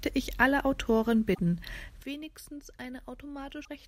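A speech recording with two kinds of defect. At 1.33 to 1.39 s and again at 3.64 to 3.68 s the sound skips forward and the next stretch comes out briefly garbled rather than as clean continuation. Both stretches span roughly one to two frame lengths of about 24 ms, which fits MP3 framing at 48 kHz. The likely cause is a broken MP3 bit reservoir: frames went missing, and the decoder, reaching back into earlier frames for borrowed data, picked up bytes belonging to the wrong frame. At 2.03 s the level drops by about 12 dB in a single step and stays there to the end of the clip. The speech and the background noise fall together, with no fade. That points to a sudden gain jump, most likely a gain change or bit shift applied instantly with no ramp.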